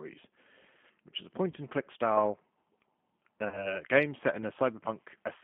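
Throughout, the G.729 codec is plainly audible: sound is confined to roughly 150 Hz to 3.4 kHz and comes out rough and synthetic, which fits an 8 kbit/s line. At 1.51–1.55 s, between "which is a" and "and click style", and again at 3.48–3.81 s, just before "game set in", VoIP packet loss concealed by the speech codec fills about 20 ms and 40 ms of missing audio with an extrapolated buzzy tone or coloured noise that fades.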